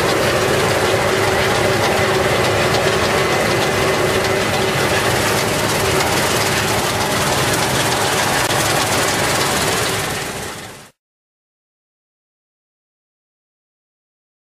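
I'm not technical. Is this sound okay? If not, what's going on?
No. The sound jumps ahead three times with a brief glitch at each join, at about 0.98, 4.60 and 6.25 seconds. The first two each lose roughly a twentieth of a second. The third loses about a fifth of a second. This is compressed frames skipped: the audio is stored in small chunks, here about 23 ms each, and some chunks were missing or rejected as damaged, so playback simply skipped past them.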